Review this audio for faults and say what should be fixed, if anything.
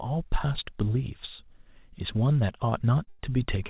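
Three times a packet arrived late and the jitter buffer ran dry, producing a short stall from a late packet at 2.70 to 2.81 s, 3.04 to 3.09 s and 3.09 to 3.21 s. Each time the receiver held the last bit of speech until the packet arrived, about 18 ms, 33 ms and 98 ms of fill, then resumed where it left off. Nothing is lost, but a sound drags, and the last two stalls run together into one hold. The band-limited sound, nothing above 4 kHz, fits a G.711 mu-law call path at 64 kbps. To prevent this, give the jitter buffer more target delay or let it adapt faster, and reduce network jitter on the route.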